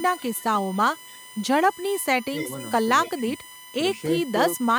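Under the whole clip sits a USB whine: a steady tone pitched on 1 kHz with its strongest harmonic up at 9 kHz, about 20 dB below the speech. That's current from the USB bus's 1 ms frames leaking into the audio through power or ground.

Echo leak comes in four bursts, at 0.17 to 0.44 s, 0.97 to 1.29 s, 2.22 to 2.5 s and 3.05 to 3.23 s. Each is a copy of the speech trailing about 279 ms behind. The first two are very quiet, the third is much more noticeable, and the fourth sits in between. The likely cause is a far-end loudspeaker whose echo canceller isn't fully removing what its microphone picks up, so some of it gets sent back.

Speech suppressed in double talk shows up twice. There's a small dip of roughly 5 dB around 2.45 to 2.5 s, then a deeper drop of roughly 15 dB between 3.06 and 3.41 s, adding up to about 250 ms of ducked speech. It overlaps the echo bursts, most likely because the canceller couldn't tell the talker from the echo and turned both down.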